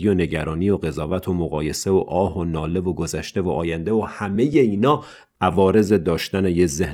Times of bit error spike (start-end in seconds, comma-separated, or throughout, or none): none